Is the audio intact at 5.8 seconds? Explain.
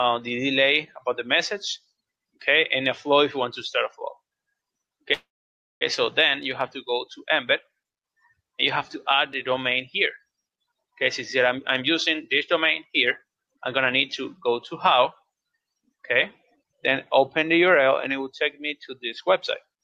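No. From 5.13 to 5.83 s a call audio freeze stretches the last sound into a fading buzz, then about 0.56 s of silence, before resuming with nothing lost. The likely cause is delayed packets emptying the jitter buffer.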